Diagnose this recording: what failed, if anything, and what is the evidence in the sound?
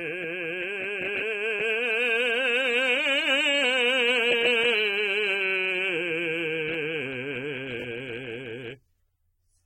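Throughout the music, nothing sounds above 16.6 kHz, and sustained tones are dull, smeared and warbly. This is likely AAC compression at the codec stage. The hearing-model quantiser starves bands at a rate near 24 kbps. The damage is steady spectral smearing, not broadband hiss as from analogue noise.

From 7.80 to 7.84 s, a short chunk plays three times with hard joins, giving a brief stutter. This is a repeated buffer at the driver/buffer stage. The repeats fit a 20 ms buffer replayed twice, and about 40 ms of new audio is lost. A dropout would give a gap rather than repetition.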